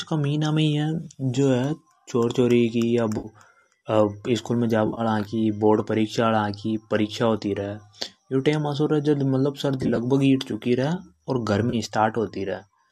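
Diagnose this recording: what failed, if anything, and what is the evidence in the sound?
The network dropped packets, causing AAC frame loss with concealment. Brief smeared, phasey patches appear at 3.18–3.28 s, 4.87–5.01 s after "स्कूल में", 9.83–9.98 s and 11.70–11.75 s after "रे और". In each, the decoder patched gaps of roughly 30 to 80 ms from the last good spectrum.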